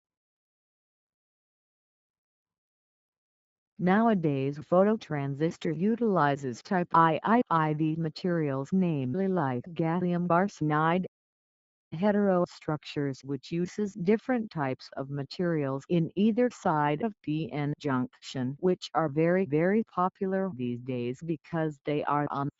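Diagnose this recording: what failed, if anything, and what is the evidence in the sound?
Nothing has failed: the signal carries the ordinary signature of a call's microphone processing and WebRTC call path, with the low bass trimmed by the high-pass filter and nothing present above 8 kHz, which fits the bandwidth that call codec was running at.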